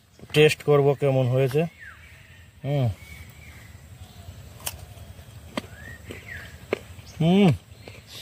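Nothing stood out as a technical fault on listening.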